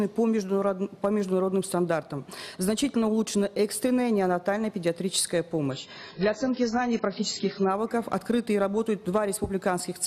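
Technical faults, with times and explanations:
5.71 to 7.71 s, adaptive stream at a lower bitrate: for two seconds the treble is abruptly cut above 7.6 kHz and the sound turns smeared and swirly. The player switched to a much leaner encode, which fits a step from roughly 96 down to 16 kbit/s of AAC. On a spectrogram the upper band vanishes at a hard ceiling, with blocky holes below it. The waveform shows no gap at either switch point.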